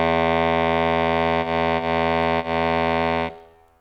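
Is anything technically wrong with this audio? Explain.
Yes. Short stalls from a late packet occur at 1.41, 1.77 and 2.39 s. Each time, a packet arrived late, the jitter buffer ran dry, and the last sound was stretched for 20, 20 and 40 ms before the music resumed intact. The result is a brief held spot with a slight buzz or dip.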